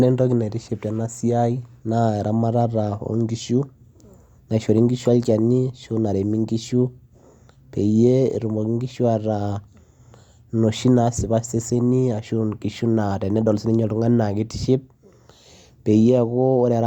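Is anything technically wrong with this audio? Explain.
No, nothing technically wrong can be heard here.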